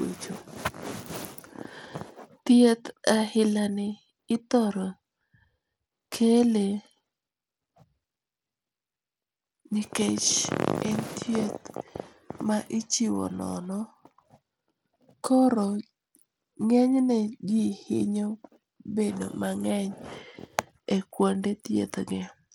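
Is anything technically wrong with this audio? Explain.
Yes. Throughout, the treble flickers and thins while gritty noise rides on the speech, likely Bluetooth SBC compression at a low bit pool, consistent with roughly 96 kbps, starving the upper sub-bands of bits.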